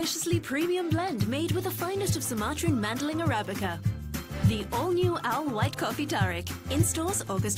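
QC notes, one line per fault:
Nothing stood out on listening to this sound.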